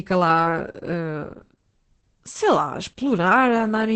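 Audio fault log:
throughout: Opus voice compression. The speech is cut off above about 8.6 kHz and sounds muffled, hoarse and slightly robotic. This is heavy damage from the SILK linear-prediction coder in wideband mode, and it fits a bitrate around 10 kbps. The excitation is coded coarsely, which roughens the voicing. A simple low-pass filter would dull the sound without adding that rasp. MP3 at low rates smears into swirly, watery artefacts and does not sound buzzy like this.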